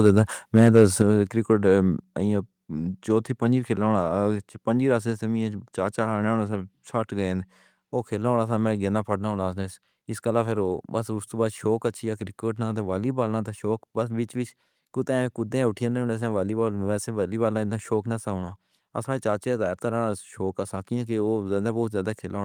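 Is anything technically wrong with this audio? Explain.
Yes. From 0.06 to 0.21 s and 0.55 to 1.02 s, microphone overload flattens the loudest peaks, likely from input gain driving the converter about 3 and 5 dB past full scale. It sounds harshly crackly, with squared-off waveform tops and broadband smearing on a spectrogram. At 1.02 s and 2.04 s, the microphone volume is stepped down by about 6 dB and then about 3 dB, likely automatic gain reacting to the clipping. Voice and background drop together, seen as abrupt steps in waveform height.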